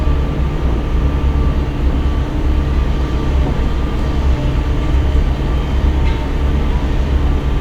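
A recording of everyday sounds, with no audible technical fault anywhere in the signal.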